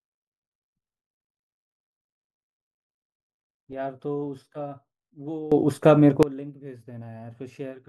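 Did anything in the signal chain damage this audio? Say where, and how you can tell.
Yes: a sudden gain jump at 5.52–6.23 s raises speech and noise floor together by about 18 dB, a sharp-edged block on the waveform and spectrogram, likely from an unramped digital gain setting.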